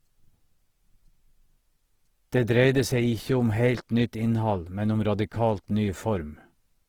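This speech clip carries audible Opus compression from start to finish. Tones sound rough and grainy rather than swirling. Energy stays spread across the spectrum, so there are few holes, but detail in the bands is replaced by noise and folded copies of lower bands. Bandwidth stays full, with content reaching about 20.2 kHz. The cause is likely a low-rate Opus encode in its music mode, which fits roughly 16 kbps.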